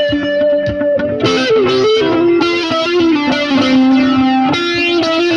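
MP2 compression runs from start to finish and is plainly audible. The sound is dull, with a gurgling, granular roughness, the kind heard on low-rate digital radio. The likely cause is MPEG Layer II coding at a low bitrate, which fits roughly 80 kbps. The encoder divides the signal into 32 equal sub-bands and shares out too few bits, so the upper bands switch off and flicker back, and the bands that remain are coarsely quantised.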